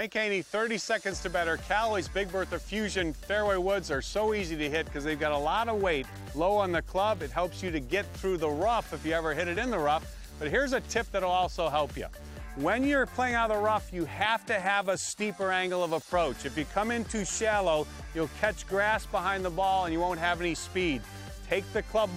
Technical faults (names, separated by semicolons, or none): none